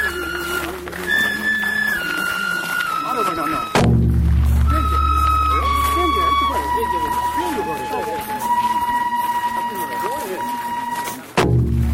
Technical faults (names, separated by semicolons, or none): none